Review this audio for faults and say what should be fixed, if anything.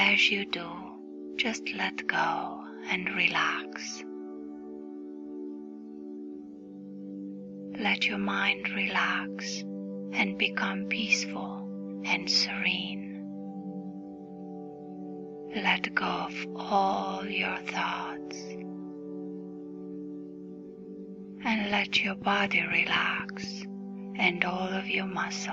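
Something in the chain was injecting a repeated pulse, most likely interference from nearby equipment or a faulty connection or power supply, and it produces a train of clicks from 21.72 s to 23.45 s. The clicks arrive at a regular pace of about 4.1 per second, around seven of them, each of much the same shape and peaking about 5 dB above the surrounding audio. They are heard as steady ticking over the sound. To prevent it, keep interfering equipment away from cables and check connections and the power supply before recording.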